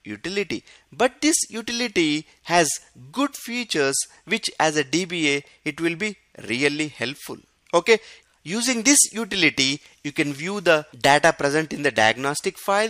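No technical faults turn up anywhere in the clip, so there is nothing to describe in time order.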